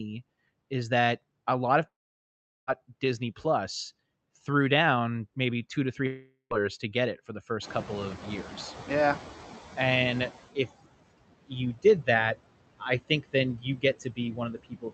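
Noise suppressor artifacts run through the whole recording. The suppressor pulls steady background down by about 19 dB, so the residue dips between phrases and swells under the talking.

A long network dropout, likely, occurs from 1.87 to 2.70 s, right after "that a lot of". A brief fading fill gives way to near silence, and about 0.8 s of speech is simply gone.

A second long network dropout, likely, runs from 6.07 to 6.53 s. Roughly 0.44 s is lost, covered mostly by a decaying buzz before a short silence.

Noise suppressor catching up follows from 7.62 to 10.39 s, after "get it for the". The room noise jumps about 18 dB near 7.5 s, and the suppressor's estimate lags, cutting only about 14 dB at first. It takes 2.77 s to settle.

Speech cut by the noise suppressor appears twice near the end. From 13.57 to 13.84 s, after "I think then", parts totalling about 150 ms drop by up to about 14 dB. 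From 14.00 s to the end, the drop reaches about 21 dB. In both places the speech sounds swallowed and faint.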